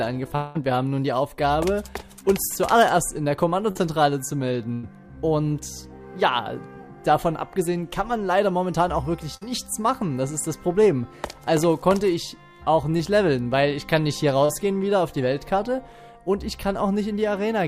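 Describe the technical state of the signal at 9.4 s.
Short concealed packet loss sits at 9.37 to 9.43 s. About 40 ms of audio never arrived, and the receiver bridged the gap with roughly 44 ms of extrapolated signal continued from the preceding sound, then crossfaded back, leaving a brief smeared, wobbly patch.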